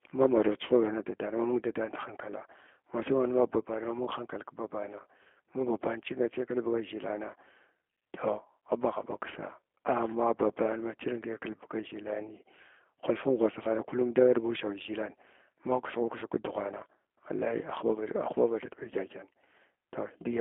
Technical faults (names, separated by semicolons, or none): G.729 codec